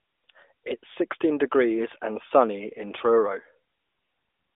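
Nothing stood out as a fault on listening to this speech clip.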